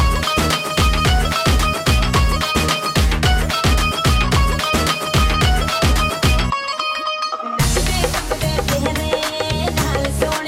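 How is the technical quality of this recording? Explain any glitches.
Nothing in the recording stood out as a technical problem on listening, and there are no glitches to explain.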